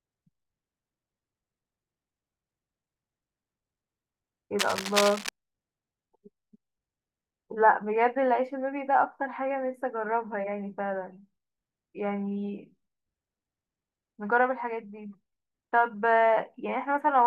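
From 4.58 to 5.29 s, cable scratch noise rasps over the speech. A worn connector or cable was likely moved, jolting its contact resistance. The bursts sit only slightly below the speech.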